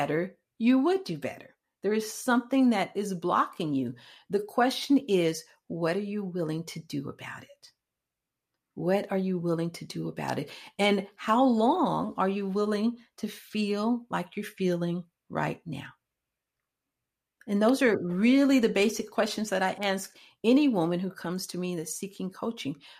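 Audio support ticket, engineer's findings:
Sharp snap at 10.28 s, just after "you willing to do". Second snap at 19.83 s, after "basic questions that I". Both brief, peaking around -20 dBFS, sitting on top of the speech. Electrical switching spike. Likely cause: a nearby switch, motor or static discharge arcing, with the audio line picking up the burst. Check grounding and cable routing near switched loads.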